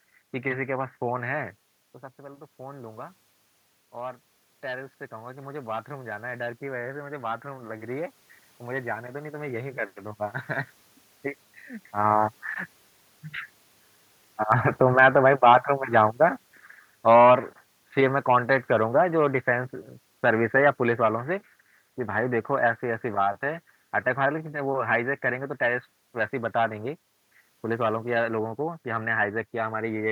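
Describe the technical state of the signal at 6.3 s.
Automatic gain rising, from 2.16 to 10.47 s: after the input dropped about 12 dB, the control is slowly adding about 10 dB, swelling voice and room noise together.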